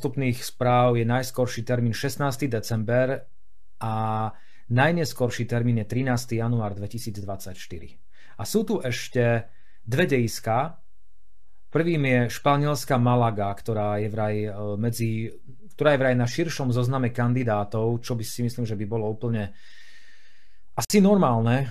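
DC offset runs through the whole speech clip: the waveform sits shifted off the zero line by a constant amount. You cannot hear the shift itself. It eats into headroom, because peaks on one side reach full scale sooner than those on the other, and on an analyser it appears as steady energy piled up at the very lowest frequencies, below anything the voice produces.

A gap at a join of encoded pieces opens at 20.85 s and lasts about 53 ms, ending at 20.90 s. The continuous speech drops into silence, its edges smeared by the codec so the silent stretch is shorter, then resumes exactly where it left off. Two separately encoded sections were joined without trimming, so the encoder's start-up delay and the padding in the final frame remained as dead air at the seam.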